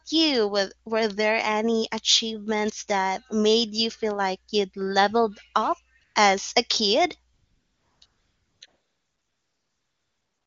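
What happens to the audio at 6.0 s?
AMR comfort noise cuts in twice, briefly at 5.99 to 6.01 s and again at 6.03 to 6.15 s. The phone judged those moments silent and sent no speech frames, so the receiver filled each gap with smooth synthetic noise in place of the real background, against otherwise clean wideband coding.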